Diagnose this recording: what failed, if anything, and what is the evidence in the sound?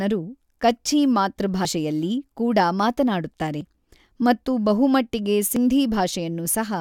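Three abrupt skips, at 1.65 s after "ಕಚ್ಛೀ ಮಾತೃ", 3.61 s after "ಕೂಡ ಮಾತನಾಡುತ್ತಾರೆ" and 5.56 s after "ಮತ್ತು ಬಹುಮಟ್ಟಿಗೆ", each dropping a few tens of milliseconds and splicing the sides together. This is audio missing between chunks, likely at the buffer stage, losing a slice at each 2-second chunk boundary.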